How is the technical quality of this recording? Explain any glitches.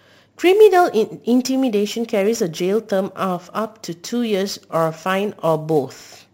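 Quality is compromised by one fault running through the whole recording.

Sample clock jitter, present from start to finish. The converter's timing wobbles by something on the order of ten microseconds, so each sample is captured slightly off its proper instant. The resulting error depends on how steeply the waveform is changing, reaching roughly 25 dB below the speech. It is heard as a grainy hiss riding on the voice, strongest on loud passages and sibilants, and absent in the pauses.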